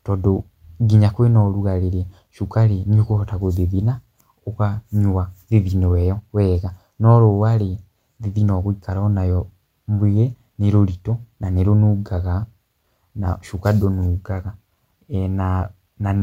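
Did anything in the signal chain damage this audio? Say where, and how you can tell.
No, nothing damaged this audio.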